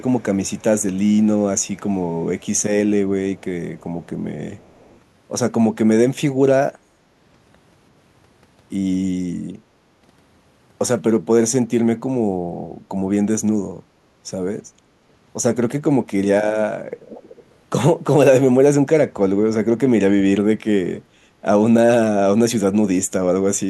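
Speech, with an echo leak: a faint delayed copy of the talker trails about 342 ms behind at 0.0–0.63 s, 1.1–2.63 s, 3.35–3.44 s, 3.75–4.07 s and 4.55–4.99 s, sitting very low under the voice. It comes back much stronger at 17.07–17.44 s, roughly 20 dB down. That's likely a far-end speakerphone whose echo canceller didn't fully scrub what its mic picked up, so the leftover got sent straight back.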